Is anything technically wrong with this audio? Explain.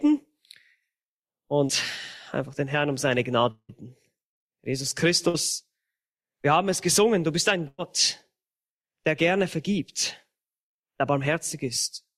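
Yes, the audio has four gaps where data failed to arrive in time for playback.

At 1.67 to 1.71 s there is a short concealed packet loss. About 20 ms of data reached the decoder too late, and the receiver bridged the hole by extending the preceding sound for roughly 15 ms before blending back into the real signal. The result is a brief smear or wobble in the sound, with that sliver of material gone.

From 3.51 to 3.71 s the sound stretches into a buzz or hiss lasting about 177 ms. It fades until roughly 70 ms of silence remains, and then the audio resumes with about 180 ms missing. This points to a long network dropout as the likely cause, with the receiver extending the last sound until it could no longer sustain it.

Two bursts of packet loss follow. At 5.29 to 5.36 s, several consecutive packets were lost, leaving about 60 ms missing, and the concealment carried the previous sound for about 52 ms while turning it down. 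At 7.68 to 7.80 s, about 100 ms went missing. The fill runs roughly 104 ms and decays into about 20 ms of silence before the audio picks up further along. Each burst sounds like a held buzz or fading hiss with a skip in the sound.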